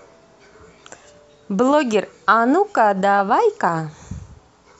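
No technical faults are audible.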